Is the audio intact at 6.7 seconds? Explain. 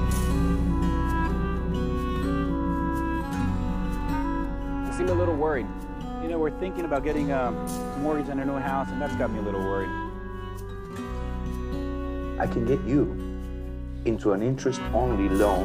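Yes, the audio is intact at 6.7 seconds, with no fault at that point.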